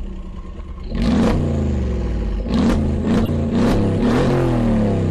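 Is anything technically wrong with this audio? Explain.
Yes, there are two stretches of corrupt frames that were decoded anyway: a faint one at 0.57–0.59 s and a loud one at 3.23–3.29 s. In each, flipped bits misplaced spectral energy across a few damaged frames.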